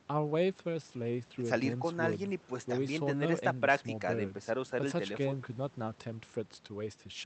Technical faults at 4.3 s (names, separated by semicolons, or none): none